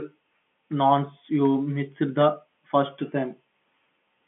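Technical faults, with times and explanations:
No technical faults turn up anywhere in this speech, which comes through as ordinary G.711 telephone coding, with the usual narrow phone band running from about 150 Hz to 3.4 kHz and nothing above roughly 3.8 kHz.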